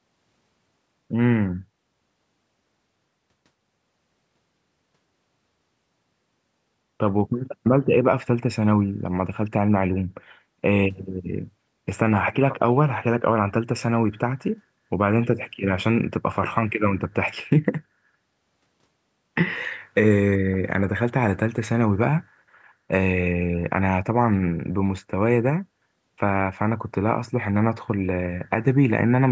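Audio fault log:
No faults are heard in this speech clip. It has passed through a call's microphone processing, which leaves nothing above 8 kHz and takes out the lowest bass as it normally does.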